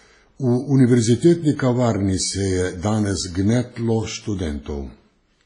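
WMA compression, present throughout the speech: the sound has a ringing, washy quality, with a hiss that swells and fades along with the signal, and nothing is heard above 10.4 kHz. The damage is heavy and is likely from a Windows Media Audio transform codec at a low bitrate, around 24 kbps. Long transform blocks smear quantisation noise over tens of milliseconds around each sound, and weaker spectral detail is discarded entirely, which thins and dulls the top end.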